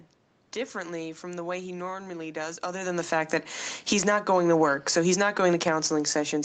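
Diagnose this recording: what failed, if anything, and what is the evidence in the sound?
The automatic gain falling fault sits in the call processing stage. From 2.76 s to the end, the speech sinks steadily, and the room noise underneath sinks with it. That shared drop is what separates it from the talker moving, which happens just before, at about 2.5 s: a talker leaning back quietens only the voice and leaves the room's background level alone. Here the gain control judged the input too hot, or its background noise too strong, and pulled its gain down gradually. The audio also carries the call codec's coding texture and has nothing above 8 kHz, which fits a wideband Opus setting.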